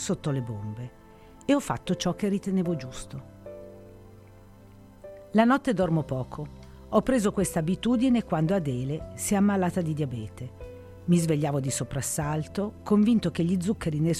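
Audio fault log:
No audible faults detected.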